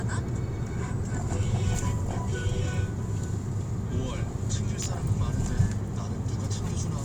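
At 4.83 to 4.86 s, an electrical switching spike cuts in. It is a sharp snap, a tight burst of clicks lasting about 30 ms. It peaks at about -15 dBFS. A nearby switch or motor likely arced onto the audio line.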